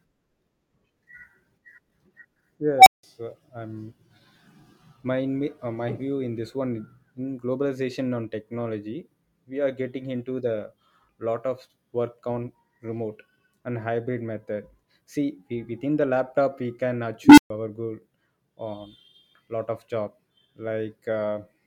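Unstable filter, at 2.79 to 3.03 s and again at 17.24 to 17.50 s in this speech. A recursive filter's feedback runs away, so a tone feeds on itself: first around 700 Hz, swelling to a harsh clipped squeal within 78 ms and then cutting to 171 ms of silence as the numbers overflow. The second, a lower tone near 300 Hz, builds over 137 ms before dropping out for 128 ms while the filter resets.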